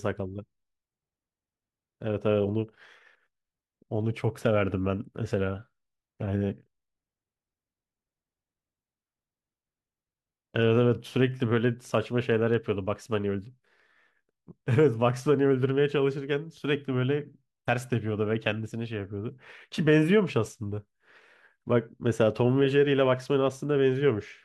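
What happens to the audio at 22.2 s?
Nothing goes wrong at 22.2 s; the speech there comes through intact, with no dropout, click, glitch or other fault.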